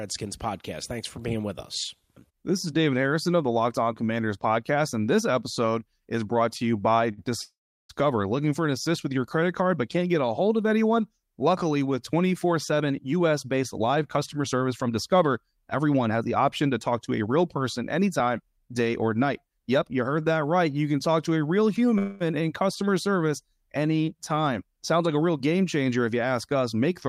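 Just after "brought to you by", at 7.11 s, a sound is held about 59 ms too long with a faint buzz. This is a short stall from a late packet: the jitter buffer ran dry, and the receiver stretched the last sound until the packet arrived, losing nothing.

From 7.41 to 7.91 s comes a call audio freeze. A fading buzz gives way to about 370 ms of silence, and the audio then resumes where it stopped, 480 ms later. Delayed packets likely emptied the jitter buffer.

From 12.72 to 18.90 s, ending just before "or night", the audio runs about 7% fast at unchanged pitch and sounds hurried. This is a jitter buffer speed-up: the receiver trimmed tiny pitch-period slices, roughly 0.4 s in all, to cut excess delay.

At 21.98 to 22.22 s a second freeze stretches the last sound as a fading buzz for 222 ms, without falling silent. Late packets likely caused it too.

From 24.92 to 27.08 s a further speed-up runs about 8% fast, dropping roughly a fifth of a second.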